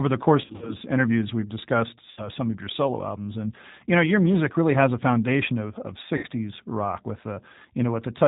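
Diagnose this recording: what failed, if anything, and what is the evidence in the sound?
At the codec stage, the whole clip carries G.729 coding. The speech is band-limited at 4 kHz and has that rough, slightly synthetic texture, plainly audible, which fits 8 kbit/s G.729. That comes from rebuilding speech out of a vocal-tract filter, pitch predictor and sparse pulses.

On the network side, VoIP packet loss concealed by the speech codec shows up three times. From 0.42 to 0.76 s, just before "interviews we've discussed", about 140 ms drops out in runs of up to 60 ms. Two more 60 ms dropouts follow: at 2.11 to 2.30 s, between "interviews we've discussed" and "some of your solo", and at 6.17 to 6.26 s, between "a foundation of of" and "rock with". Each one is stretched into a fading buzzy tone or coloured noise, because the decoder extrapolates from its last frame.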